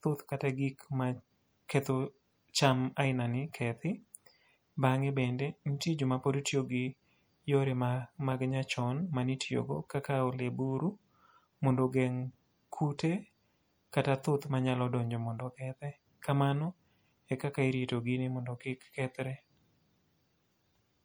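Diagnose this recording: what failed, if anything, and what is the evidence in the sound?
MP3 compression artefacts are plainly audible throughout, a codec-stage fault. S sounds turn watery and swirly, and attacks smear. This is likely a bit-starved encoder, consistent with a 64 kbps setting, dropping weak frequency lines from frame to frame.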